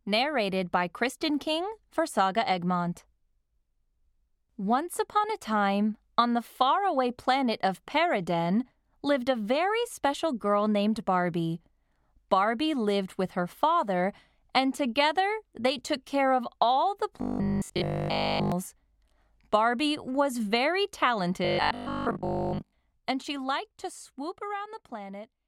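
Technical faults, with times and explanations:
17.22–18.52 s and 21.45–22.73 s, robotic sound from repeated short buffers: the sound becomes a rigid metallic buzz at 50 Hz, fully in the first stretch and mostly in the second. The likely cause is a 20 ms chunk looping while audio is late. The waveform shows identical repeating 20 ms cycles, and the spectrogram shows evenly spaced horizontal lines 50 Hz apart.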